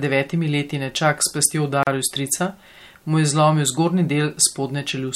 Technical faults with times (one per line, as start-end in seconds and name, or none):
1.83-1.87 gap at a join of encoded pieces